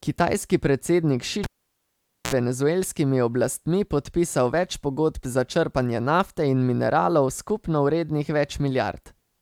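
From 1.44 to 2.34 s, a cable pulled and plugged in breaks the signal: pop, 0.85 s near-flat waveform, 66 ms of 60 Hz buzz striping the spectrogram, another pop before "venezuelskimi oblastmi podpisal več".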